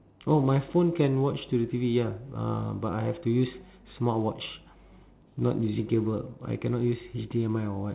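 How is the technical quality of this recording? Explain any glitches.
No glitches can be heard anywhere in the speech. It has the narrow telephone sound of G.711 mu-law coding, with nothing above 4 kHz, which fits 8 kHz sampling, and a faint grain that rises and falls with the voice.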